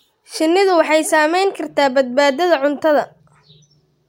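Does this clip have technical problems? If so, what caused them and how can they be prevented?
No, no technical problems can be heard here.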